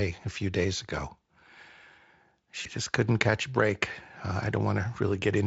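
At 2.61 to 2.67 s there is VoIP packet loss concealed by the speech codec. About 40 ms of speech went missing, which fits two lost 20 ms frames. The Speex decoder filled the gap by repeating its last pitch and filter at falling gain, so the speech smears into a brief buzzy tone or coloured noise that fades. A plain dropout would leave silence or a click instead. Because each rebuilt frame feeds the next, the voice stays weak or distorted just after 2.67 s.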